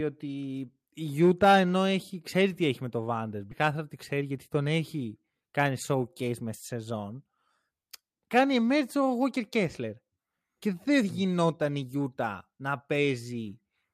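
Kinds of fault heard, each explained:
Skip ahead: at about 3.51 s the speech jumps forward with no gap filled, so roughly 0.4 s of audio is simply gone and the two sides butt together. That points to queued audio being discarded, which also cuts the delay by about that much.
Jitter buffer speed-up: from about 4.13 to 4.62 s the speech runs at roughly 111% speed with the pitch unchanged, so it sounds a bit hurried. The receiver is trimming small pitch-period chunks, around 70 ms in total, to shrink an overfull buffer.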